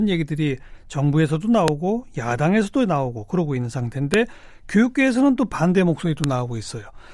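File header played as audio occurs at 1.68 s, 4.14 s and 6.24 s, each a sharp, loud click lasting about a millisecond that cuts across the speech regardless of what it is doing. These mark the joins where separate WAV pieces were spliced or streamed together with their headers left in place. The few dozen header bytes were then read as sample values, producing a brief burst of arbitrary amplitude heard as a snap at the start of each new piece.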